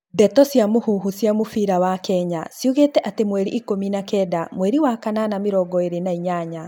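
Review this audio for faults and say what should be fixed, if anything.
No faults found; nothing to fix.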